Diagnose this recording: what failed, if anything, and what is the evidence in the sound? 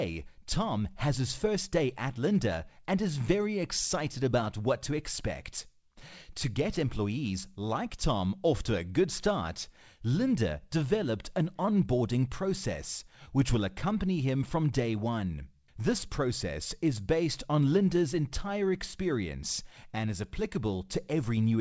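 Nothing failed; the call path behaves as expected.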